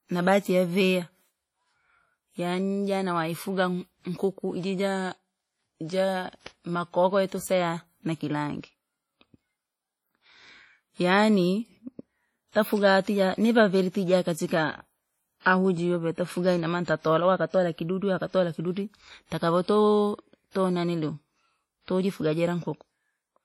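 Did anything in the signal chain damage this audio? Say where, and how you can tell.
Yes, at the codec stage. Throughout the speech there is a ringing, washy texture with hiss that swells and fades with the signal, and nothing is present above 17.3 kHz. This heavy damage is likely WMA compression at a low bitrate, consistent with around 32 kbps, which zeroes weak spectral lines.

The same codec causes pre-echo at 15.40 to 15.46 s, just before "ahu jiyotafuga inamaana tatalala". A smear of hiss about 57 ms long precedes the attack, because quantisation noise scaled to the loud onset was spread across the whole transform block, including the quiet part before it.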